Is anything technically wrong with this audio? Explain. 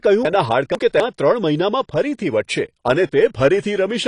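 Yes, there are two faults in this speech recording.

Throughout, the sound is dull and smeared, with a fizzy, warbling edge on sibilants and plainly audible codec damage. This is AAC compression, likely AAC-LC at a low bitrate around 32 kbps. The encoder runs short of bits, so it discards the top of the spectrum and coarsely quantises what remains. On a spectrogram, energy stops flat at about 10.1 kHz, and patchy holes and blocky smearing show in the upper bands.

Between 0.25 and 1.0 s, the chunks are out of order. The audio is cut into 250 ms pieces, and the piece belonging at 0.25 s arrives late, playing two pieces behind where it should. It is heard as a jumbled, garbled moment, with hard joins at 0.25, 0.75 and 1.0 s, where unrelated audio is butted together. On the waveform these three joins appear as abrupt discontinuities, and the spectrogram shows sudden breaks in the harmonic tracks at each join.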